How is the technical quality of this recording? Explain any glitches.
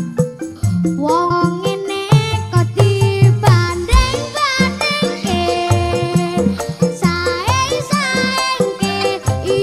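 Two short glitches interrupt the recording, both from damaged data in a compressed stream: one from 1.27 to 1.31 s and one from 9.01 to 9.03 s. Corrupted bytes made the decoder misread those frames and lose sync until it found the next valid frame header. Each is heard as a brief chirp or blip. On a spectrogram each shows as a narrow vertical smear of broadband energy; the waveform shows a sudden discontinuity.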